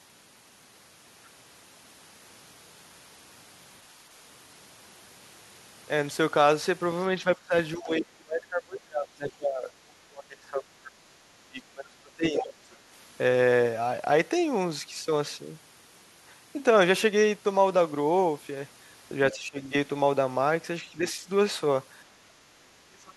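During double talk, the echo canceller likely could not separate the near talker from loudspeaker echo and turned everything down. This speech suppressed in double talk makes the speech dip at 7.24–7.53 s, 7.75–10.96 s and 11.45–12.53 s. Within that last dip, at 12.37–12.43 s, there is other side's voice leaking through. Leftover loudspeaker echo likely slipped past cancellation as a brief scrap only slightly quieter than the speech. Suppression returns at 19.32–19.59 s as a modest dip, barely at 20.99–21.28 s, and most deeply from 22.27 s to the end.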